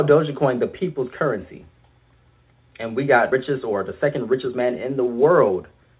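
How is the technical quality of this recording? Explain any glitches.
The recording is band-limited, with nothing above 4 kHz, which fits a narrowband telephone codec. Two timing glitches stand out.

At 3.32 s there is a skip ahead. About a second of audio was discarded while later audio waited, so playback jumps straight on with no silent gap, unlike a dropout.

From 4.32 to 5.96 s there is a jitter buffer speed-up. Tiny pitch-period slices, roughly a fifth of a second in total, were trimmed to drain excess delay. The audio runs at 114% speed and sounds hurried, but the pitch is unchanged, which separates it from a resampling error.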